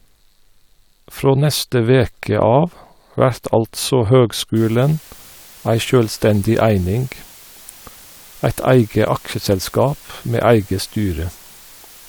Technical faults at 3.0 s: none

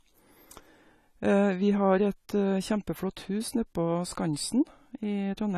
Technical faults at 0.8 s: AAC compression

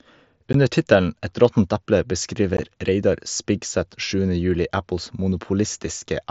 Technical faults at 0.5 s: unconcealed Bluetooth headset packet loss

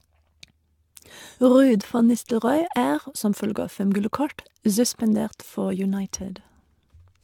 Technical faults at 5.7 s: generation loss

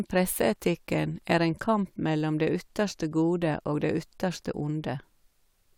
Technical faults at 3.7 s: none

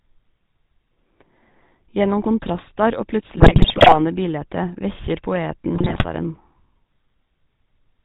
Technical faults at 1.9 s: GSM full-rate codec

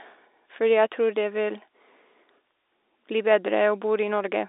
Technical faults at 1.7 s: none

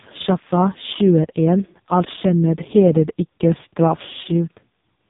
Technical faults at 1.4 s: AMR narrowband mobile codec

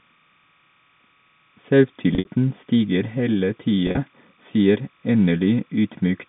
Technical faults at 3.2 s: timecode bleed

